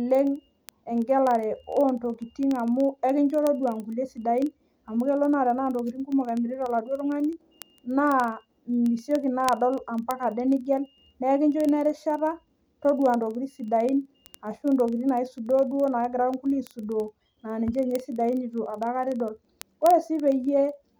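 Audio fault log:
0.11 to 20.98 s, word clock ticks. Sharp ticks run under the speech at a steady rate, roughly one every 40 ms, several hundred in all. The receiving device runs on its own clock, not locked to the sender's. The two clocks differ by something like 500 parts per million. Each time they slip past each other, one sample is dropped or repeated. That one-sample jump breaks the waveform, and each break is heard as a tick.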